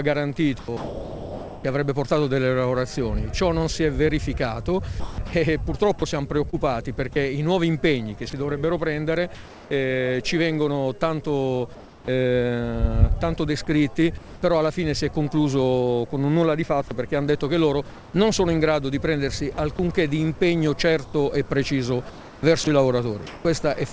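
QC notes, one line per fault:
0.59–1.64 s, sound chopped by the voice detector: about 960 ms of sound swapped for flat noise in pieces, likely from detector switching; the waveform shows gaps, the spectrogram smooth featureless patches.
5.00–9.71 s, sound chopped by the voice detector: about 690 ms in total replaced by steady noise, likely from repeated detector toggling; the spectrogram shows detail dropping out into uniform texture.
11.75–12.08 s, comfort noise in place of the background: 330 ms of real background, about 26 dB below the loud parts, likely swapped for synthetic noise about 2 dB quieter; it shows as a flat, textureless band.
12.05–12.08 s, onset clipped by the voice detector: the first 30 ms of the returning sound are missing, likely because detection lagged; the waveform jumps abruptly from noise into the sound.
14.18–14.42 s, comfort noise in place of the background: 240 ms of background, about 20 dB below the loud parts, likely replaced by smooth noise about 2 dB lower; the spectrogram shows detail flattening.
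16.88 s to end, sound chopped by the voice detector: about 960 ms scattered through this stretch turned into filler noise, likely from detector switching; the waveform shows choppy dropouts, the spectrogram featureless strips.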